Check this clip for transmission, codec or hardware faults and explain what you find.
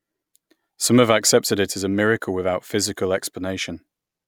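The signal shows no technical faults, holding steady throughout the speech with nothing to suggest a problem in how it was captured or carried.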